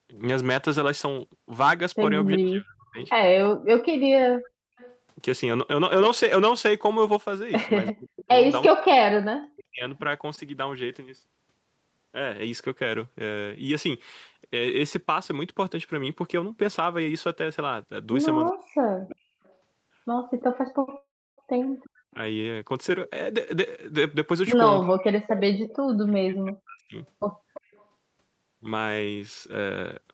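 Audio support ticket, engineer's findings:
Echo leak: delayed copy of the talker about 339 ms behind, 2.33–7.92 s at about -15 dB, 19.45–22.13 s at about -30 dB, 25.38–27.85 s at about -20 dB. Likely far-end loudspeaker pickup the echo canceller didn't fully cancel, so leftovers got sent back.

Speech suppressed in double talk: talker dips hard while the other side speaks. 2.38–2.98 s down about 30 dB, around half a second hit. 7.92–9.84 s down about 40 dB, around a second. 18.5–26.96 s down about 40 dB, roughly 3 s in pieces. Likely the canceller couldn't tell talker from echo and ducked both.

Short stall from a late packet: 20.85–20.89 s, sound held a touch long, with 16 ms stretched in and nothing lost. Jitter buffer ran dry on one late packet, so the receiver extended the last bit of sound and then resumed in the same spot.

Call audio freeze: 20.97–21.40 s, a 407 ms hole. The last sound smears into a fading tail, then about 310 ms of silence, then it picks up where it stopped with nothing missing. 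Likely packets held up in transit and the jitter buffer emptied.

Jitter buffer speed-up: 23.32–25.12 s, runs at 104% speed, same pitch. The buffer was overfull, so the receiver snipped many tiny pitch-period chunks, about a tenth of a second in total, to bring the delay back down.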